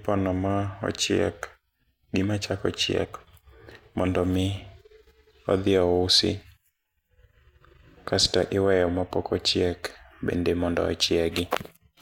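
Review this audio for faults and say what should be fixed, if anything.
Right after "gima chako", from 3.03 to 3.06 s, the speech lurches forward. This is compressed frames skipped: about one frame, roughly 20 ms of audio, never reached playback. Prevent it by checking the file's integrity and re-encoding or re-transferring it from an undamaged source.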